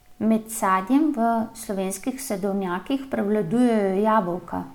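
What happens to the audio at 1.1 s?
Nothing goes wrong at 1.1 s: the speech carries on intact through that moment, with no dropout, click, glitch or other fault to be heard there.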